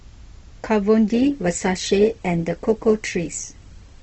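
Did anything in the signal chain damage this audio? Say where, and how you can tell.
Yes. At the network and codec stage, the adaptive stream dropped to a lower bitrate at 1.13 s and stayed there to the end. Codec artefacts abruptly rise with no gap. A spectrogram would show the quality change sharply at that instant, which fits a switch from about 64 to 16 kbit/s Opus.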